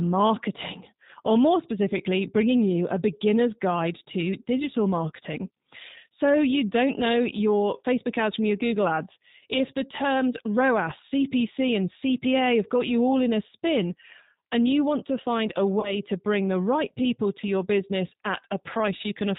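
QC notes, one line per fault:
throughout, G.729 codec: rough, synthetic speech with nothing above 4 kHz, which fits an 8 kbit/s G.729 coder rebuilding the voice from a filter, pitch predictor and sparse pulses.
15.80–15.94 s and 17.41–17.45 s, VoIP packet loss concealed by the speech codec: the voice smears into a fading buzzy tone or coloured noise, then stays weak briefly, as the decoder stretches its last pitch and filter over gaps of about 30 ms and 20 ms.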